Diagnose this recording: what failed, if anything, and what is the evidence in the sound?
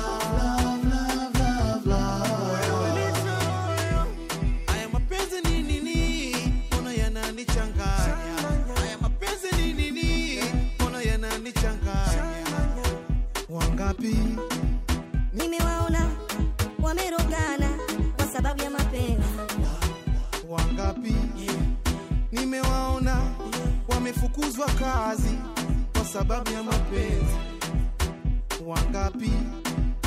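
From 15.39 to 19.64 s, a section at the wrong speed runs 1.28 times fast, with pitch raised about four semitones and tempo hurried together. The likely cause is playback or an edit clocked at the wrong rate, stretching nothing and simply resampling that stretch.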